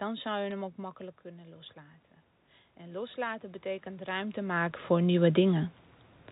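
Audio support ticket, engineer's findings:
Bit errors on a digital phone line, 0.51 s (between "zou je" and "hem ook makkelijk kunnen") and 4.08 s: sharp ticks from flipped bits in single G.711 samples at a low error rate.

Automatic gain rising, 2.77–5.4 s, after "ook makkelijk kunnen loslaten": input level fell about 12 dB, so the AGC slowly raised gain about 11 dB, swelling speech and room noise together.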